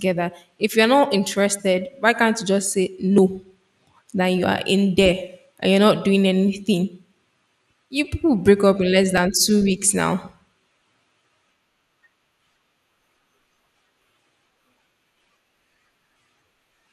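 A speech clip with two tiny skips, at 3.18 s after "can't you just say" and at 9.18 s just before "two weeks now". They sit exactly 6 s apart and each drops only a few milliseconds, so it's likely audio missing between chunks, lost as a 6-second block is closed and the next opened. From 4.32 to 4.39 s, just before "are in", there's a short patch of DAB burbling, where bit errors on a weak signal got past correction into the audio data, hitting about three frames.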